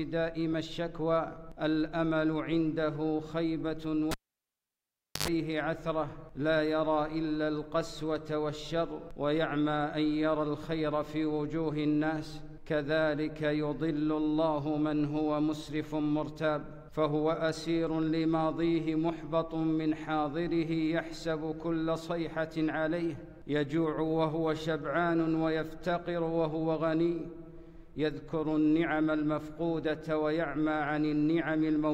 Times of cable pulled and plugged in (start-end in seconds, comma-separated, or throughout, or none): 4.11-5.28